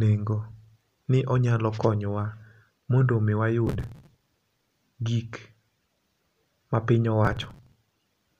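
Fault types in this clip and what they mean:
Processor overload crackle: The processor falls behind and misses one short buffer deadline after another. Each missed buffer is skipped, leaving a tiny hard-edged gap in the speech. Here this happens in two bursts, from 3.67 to 4.77 s and again from 7.25 to 7.76 s. The gaps come very fast, which fits buffers of only a few milliseconds. They merge into a gritty, tearing crackle that stops once the load eases.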